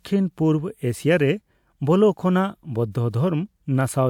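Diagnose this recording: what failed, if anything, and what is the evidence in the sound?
Nothing in this speech recording points to a failure at any stage of the chain. No event anywhere in the sound calls for a diagnosis.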